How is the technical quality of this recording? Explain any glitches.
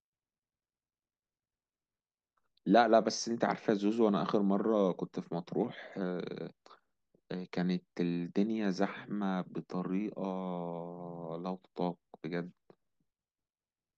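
Nothing in the recording stands out as a glitch; the speech carries on steadily with no technical faults to point to.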